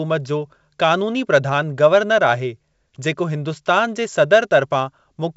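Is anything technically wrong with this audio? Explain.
No, nothing is technically wrong with this audio.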